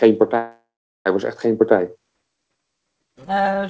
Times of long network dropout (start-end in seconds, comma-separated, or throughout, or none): 0.38-1.07